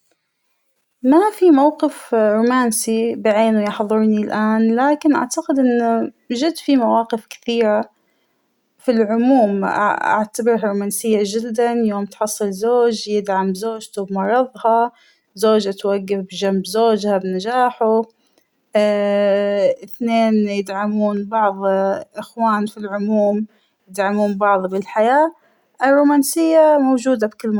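A faint, regular ticking, about ten per second, runs under the speech from 0.10 s to 27.52 s. These are clock slip clicks, likely from two unsynchronised device clocks about 200 ppm apart, each slip dropping or repeating one sample.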